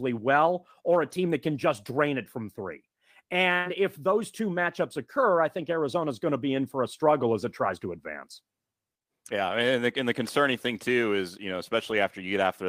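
At 7.93 s and again at 11.89 s the speech turns briefly rough and grainy for about 20 ms, with no gap or dropout. Each is a lost packet rebuilt from error correction: one packet failed to arrive, but the next one carried a low-bitrate backup copy of it, so the decoder played that 20 ms substitute instead of leaving a hole. The coarser, noisier texture comes from that reduced-quality copy.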